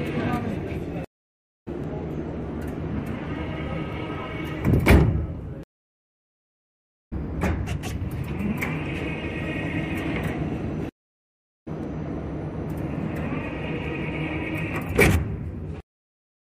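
From 1.84 s to 15.86 s, periodic USB or driver dropouts punch roughly two-millisecond silent gaps every 2.0 s, heard as regular ticks; waveform notches, spectrogram vertical lines.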